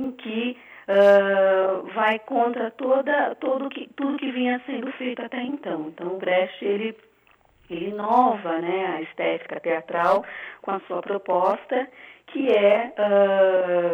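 From start to finish, one channel arrives about 40 ms behind the other, and the two are then summed to mono. This is a channel delay (doubling) fault: a long buffer holds back one side, so every sound is heard twice at equal level. At 40 ms the copies don't fuse into a single image. The result is a thickened, doubled sound, close to a short slap echo, trailing each attack and onset throughout the audio.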